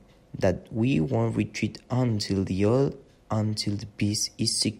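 No technical faults are audible.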